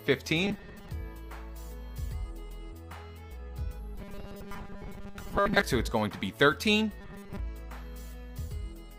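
The audio turns robotic three times, from 0.43 to 0.89 s, 3.96 to 5.63 s and 7.01 to 7.39 s, becoming a rigid, metallic buzz at 200 Hz that only loosely follows the underlying sound. This is likely robotic sound from repeated short buffers: a chunk of about 5 ms is looped in place of roughly 70 percent of the real audio. A spectrogram would show an even comb of harmonics every 200 Hz, and the waveform a single 5 ms cycle repeating.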